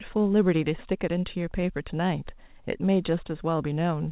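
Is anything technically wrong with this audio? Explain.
No, no technical faults here.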